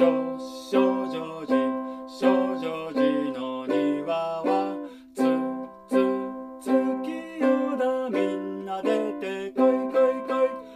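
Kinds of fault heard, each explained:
No technical faults are audible anywhere in the clip.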